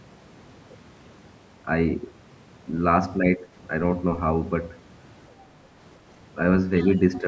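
From 3.21 to 3.49 s the speech dips by roughly 10 dB, a fraction of a second in total, and sounds briefly ducked. This is likely speech suppressed in double talk, where the echo canceller, unable to separate the talker from overlapping far-end audio, attenuated both.

Between 6.8 and 7.19 s a faint second voice sits underneath, very low at around 25 dB below the talker. It is likely the other side's voice leaking through, residual loudspeaker echo that the canceller failed to fully subtract from the microphone signal.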